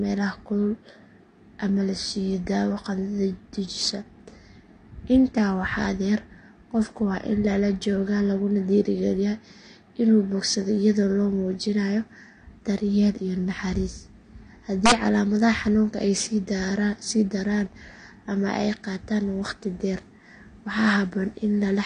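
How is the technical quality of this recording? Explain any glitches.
The recording has two problems: constant codec damage and one sharp crack.

Throughout, the speech sounds dull and smeared, with nothing above 10.1 kHz. This is likely AAC compression at a low bitrate, around 32 kbps.

From 14.86 to 14.92 s, integer overflow occurs. Peaks exceed the limit by about 3 dB and wrap to the opposite sign, producing a violent crack.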